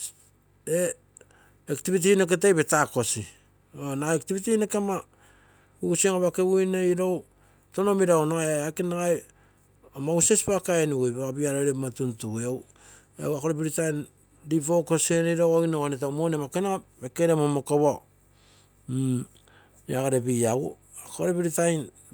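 A speech recording, and nothing is technically wrong with it.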